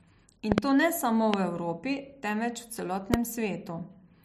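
Loud pops sit on top of the speech: a quick double pop at 0.52–0.60 s, then single pops at 1.34–1.36 s and 3.14–3.16 s, each around 20 dB above the speech. They are likely voltage spikes from a switch, plug or static discharge. On a waveform each appears as a tall, narrow spike. On a spectrogram each is a thin vertical stripe across all frequencies, with the speech continuing underneath.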